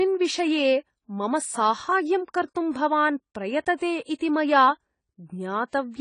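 From the start of the clip the speech is dull and band-limited, with nothing above about 10 kHz. This is the signature of AAC compression, likely AAC-LC at a low rate, and the plainly audible damage fits something near 24 kbps. To save bits, the encoder discards the top octave and coarsely quantises what remains. Sibilants turn soft and fizzy, and sustained vowels pick up a warbling smear.

At 4.18 to 4.21 s a pre-echo precedes an attack: a brief hiss about 24 ms long. The attack lands late in a transform block. The quantisation noise budgeted for that loud onset spreads across the whole block, including the quiet stretch before it. That noise is audible as a short smeared rush leading into the transient, which blunts the attack's edge.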